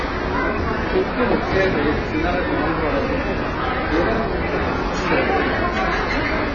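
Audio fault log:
throughout AAC compression: nothing remains above 7 kHz, so the audio sounds dull, with smeared, warbling sustained sound. This is likely heavy AAC-LC coding. Starved of bits, the encoder discards the top band and coarsely quantises the rest, which fits a bitrate near 16 kbps.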